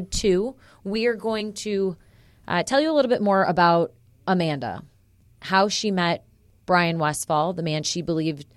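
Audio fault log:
1.40 s, compressed frames skipped: the audio jumps forward by around 20 ms, which points to about one lost frame and fits a frame length near 23.2 ms. The decoder either never received that frame or discarded it as damaged, so the audio just after it arrives early.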